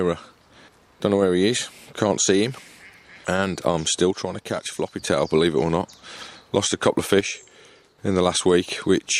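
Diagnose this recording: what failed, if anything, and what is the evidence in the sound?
Sound abruptly drops about 6 dB from 4.11 to 5.07 s and 7.21 to 7.98 s: likely one channel drops out in the analogue wiring.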